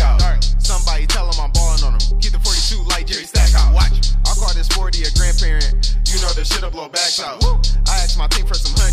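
Hard clipping runs through the whole clip, but it's the mild kind: the signal is pushed about 3 dB past what some stage in the chain could pass, so only the loudest peaks, something like one percent of the audio, get their tops sliced flat. Those squared-off peaks throw extra harmonics high up the spectrum, and you hear it as a brief crackle or grit on the loud moments rather than a constant fuzz.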